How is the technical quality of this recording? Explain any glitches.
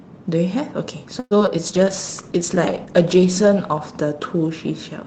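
The recording is compromised by two audible call-transmission faults from early on. The Opus call path otherwise carries speech with a top end near 8 kHz.

Repeated packet loss (robotic sound) runs from 1.19 to 1.60 s. Four gaps, the longest 115 ms, were filled by extending preceding audio, covering about 35% of the stretch. The result is choppy speech with pieces missing.

A call bitrate drop follows from 1.67 s to the end. The coarser, muffled coding is consistent with the encoder falling from around 48 kbps to roughly 10 kbps. It stays lowest for about 1.4 s, which makes the speech rough and watery.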